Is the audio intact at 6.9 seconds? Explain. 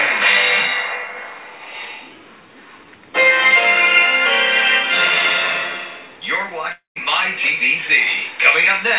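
No. A likely long network dropout halted incoming audio from 6.72 to 6.99 s. The last sound fades as buzz or hiss into silence, then resumes with 240 ms lost.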